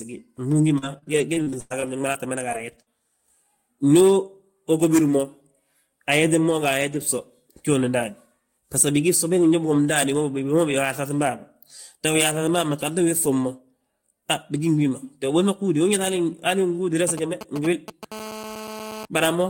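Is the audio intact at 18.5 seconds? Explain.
No. GSM phone buzz runs from 18.12 to 19.05 s. A nearby 2G phone transmits in bursts about 217 times a second during a call, and the audio circuit rectifies them. The result is a steady, raspy 217 Hz buzz, about 13 dB below the speech.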